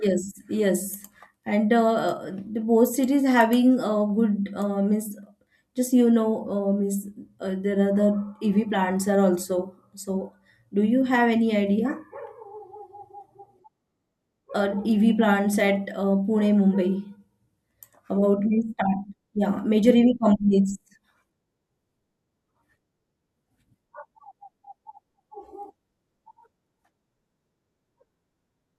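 Listening to the speech recording turned up nothing that stood out as a technical fault.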